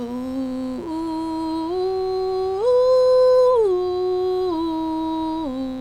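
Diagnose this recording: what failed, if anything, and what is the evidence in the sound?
Mains buzz runs through the whole music clip: a steady, raspy 60 Hz buzz sitting roughly 25 dB below the programme. Analogue wiring failed. A dimmer, rectifier or poor shielding injects sharp spikes twice per mains cycle, spraying 60 Hz harmonics into the kilohertz range.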